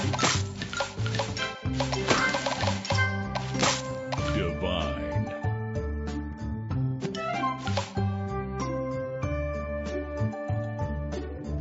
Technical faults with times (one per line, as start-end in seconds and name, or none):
none